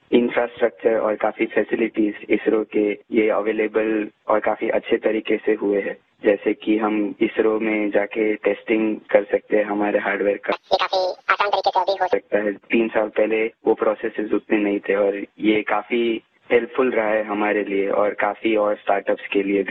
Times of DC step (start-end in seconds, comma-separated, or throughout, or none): none